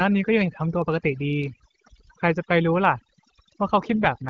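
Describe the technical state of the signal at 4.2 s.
At 4.2 s the AMR rate drop is in effect. It runs from 3.85 s to the end of the clip at 4.29 s. The link appears to have forced the AMR-WB coder into a lower mode, and the roughening fits a step down from 12.65 kbit/s to 8.85 kbit/s. Fewer bits go to the voice itself, so the pitch pulses and formants are modelled more coarsely. Bandwidth stays the same and nothing drops out, but the voice turns grainier and more synthetic than it sounds before 3.85 s.

Overdone noise removal also affects this moment, as it does the whole clip. The suppressor was set so aggressively that any frequency band close to its noise estimate is pulled far down or muted outright. Quiet parts of the voice are removed along with the noise. Between syllables the background drops and breaks up into twinkling specks where isolated bands flicker on and off.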